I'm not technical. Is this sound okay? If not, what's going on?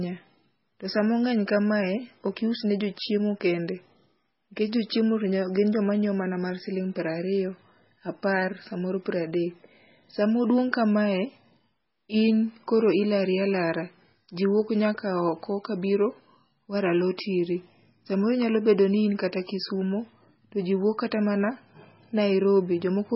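No. MP3 compression damage runs through the whole recording, from start to finish. The speech has nothing above 5.6 kHz, so it sounds dull and muffled, and there's a watery, swirly quality where quiet detail flickers in and out. The likely cause is that the file was squeezed very hard to make it small: the encoder threw away the treble and most of the fine detail, keeping only the parts it judged most essential.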